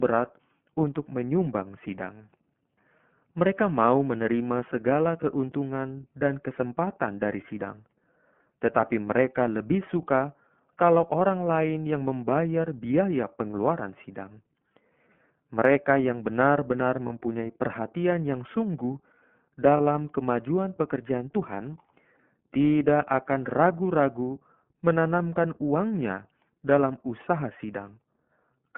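All the way through, the speech has that iLBC codec sound: the band stops at about 3.4 kHz with little below 150 Hz, and it's plainly rough and a bit synthetic, which fits the 13.33 kbps mode with 30 ms frames. At 17.06 to 17.10 s, just before "perhatian yang sungguh", and again at 19.77 to 19.81 s, before "kemajuan pekerjaan", there are lost iLBC frames. Each dropout sounds like a brief held, buzzy vowel, where the decoder looped the last pitch cycle with noise for about one frame. The voice comes back clean straight after.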